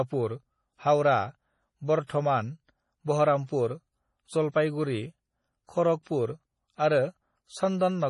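From the first second the speech has that watery, swirly quality of heavy MP3 compression, most likely. Everything above about 11.3 kHz is gone, and weak detail flickers in and out as the encoder starves for bits, which fits a low rate around 32 kbps.

At 3.47 to 3.49 s there's pre-echo: a short hiss creeps in about 25 ms ahead of a sharp attack. The codec spread its noise across the whole block, so the quiet moment before the hit got filled, and the attack itself sounds soft and smeared.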